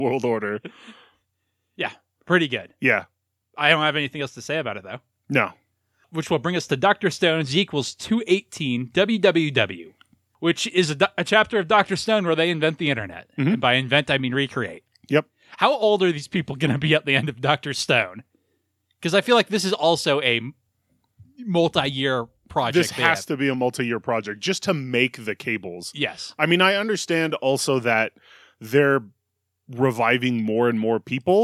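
No technical faults are audible.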